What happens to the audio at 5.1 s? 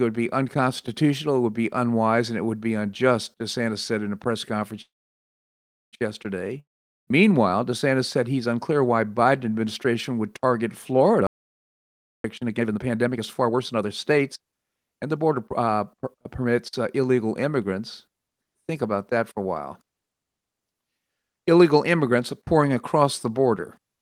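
A call audio freeze runs from 4.81 to 5.95 s, right after "in a press conference". Delayed packets likely drained the jitter buffer, so the last sound trails off into about a second of silence, then speech resumes exactly where it stopped, now running about 1.1 s late.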